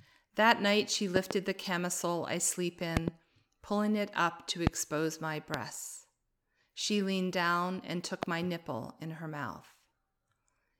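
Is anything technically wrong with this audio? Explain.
Yes, there are five loud pop events, each jumping around twenty decibels above the speech: double pops at 1.16–1.33 s and at 2.97–3.10 s (after "camisole I sleep"), and single pops at 4.67–4.69 s, 5.54–5.56 s and 8.23–8.25 s (after "leaned down and"). Each is likely an electrical voltage spike shaped by the downstream circuitry. Unlike a dropout, the speech continues uninterrupted beneath each pop.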